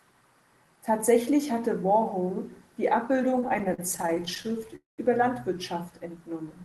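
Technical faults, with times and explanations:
3.13–4.74 s, repeated stalls (stutter): the speech drags and hiccups through many brief holds, the longest 42 ms, filling about 346 ms in all, roughly a fifth of that stretch. Packets kept arriving late, so the jitter buffer ran dry repeatedly and the receiver stretched the last sound each time.
4.76–5.00 s, call audio freeze: a 220 ms stop in which the held sound fades out, leaving about 150 ms of silence before the speech resumes where it left off. This is likely a network hold-up that emptied the jitter buffer, with concealment filling the wait.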